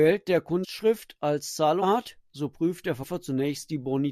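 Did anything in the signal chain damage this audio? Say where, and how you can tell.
Yes, at the codec stage: compressed frames skipped. At 0.63–0.65 s, 1.81 s and 3.02 s the speech lurches forward, losing roughly 400 ms at the first jump and about 300 ms at the other two. That's whole frames either missing from the file or rejected by the decoder, around twenty then ten at a time. Each frame is 23.2 ms.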